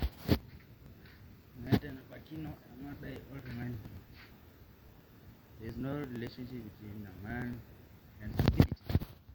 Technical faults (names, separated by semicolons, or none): periodic USB or driver dropouts